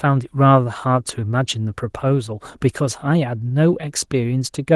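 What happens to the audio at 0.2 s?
Nothing goes wrong at 0.2 s; the speech there comes through intact, with only the light, full-band coloration of the Opus voice compression that runs through the whole clip.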